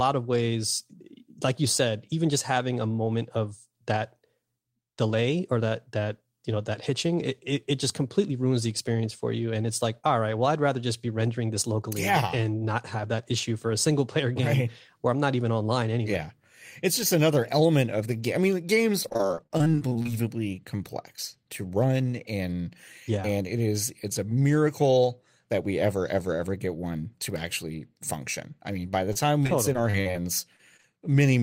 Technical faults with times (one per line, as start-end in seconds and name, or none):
19.03-20.07 repeated packet loss (robotic sound)
29.13-30.17 repeated packet loss (robotic sound)
30.57-30.85 short concealed packet loss